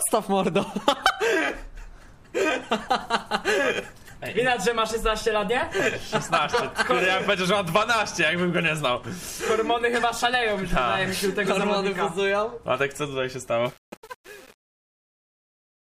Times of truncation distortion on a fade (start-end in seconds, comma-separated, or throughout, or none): 13.66-15.94